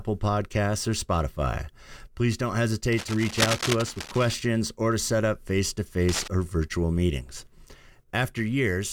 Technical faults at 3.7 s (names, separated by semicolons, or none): cable scratch noise